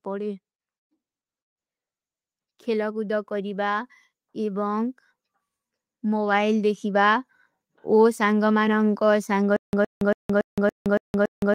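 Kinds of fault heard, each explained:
Automatic gain rising: from 2.64 to 4.99 s the level control judges the speech too quiet and lifts its gain by about 5 dB, then again from 6.0 to 8.3 s by about 4 dB. Each time the voice and the background swell together, gradually, over a couple of seconds.
Stutter with silent gaps: from 9.56 s to the end, a 114 ms burst of speech plays again and again, each time followed by 168 ms of digital silence, repeating every 282 ms. This is likely a stalled player or stream re-sending its last fragment, and the speech meant for that stretch is lost.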